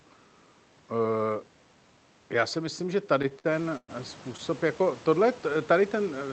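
A speech clip where, from 3.19 to 3.90 s just after "já si myslím že", packets arrived late and the jitter buffer repeatedly ran dry, causing repeated stalls (stutter): eight gaps, the longest about 114 ms, filled by stretching the last sound, so the speech drags and stutters without losing anything.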